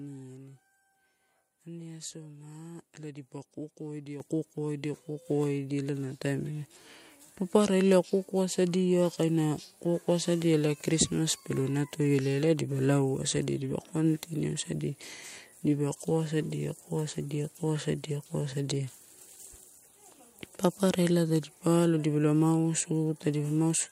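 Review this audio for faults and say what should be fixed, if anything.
The microphone volume stepped up twice: at 4.2 s the level rises abruptly by about 8 dB, and at 5.22 s by about a further 3 dB. Speech and background noise jump together, because the input gain at the device was raised in discrete steps, apparently by the call software reacting to a quiet microphone, rather than the sound itself getting louder. To prevent it, set a fixed, adequate input level and disable automatic microphone gain adjustment in the call software.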